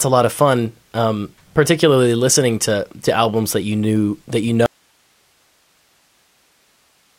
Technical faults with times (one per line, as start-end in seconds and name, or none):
4.66-7.18 audio dropout to a faint residue